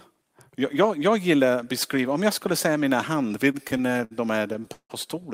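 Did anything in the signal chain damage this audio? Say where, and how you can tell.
Yes, at the network and jitter-buffer stage: repeated stalls (stutter) from 3.51 to 4.92 s, right after "skulle säga mina hand". Packets arrived late or slower than playback, so the buffer kept running dry. Fourteen times the receiver stretched the last sound to cover the wait, fading it in the longest hold of 163 ms. About 381 ms, roughly 27% of that stretch, is filled-in sound. Nothing is lost, but the speech drags and stutters.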